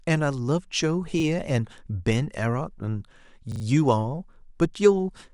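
A speech recording with two short stutters, at 1.2 s and 3.52 to 3.64 s. Each is a repeated buffer: a roughly 40 ms piece replays once, then three extra times, with hard joins.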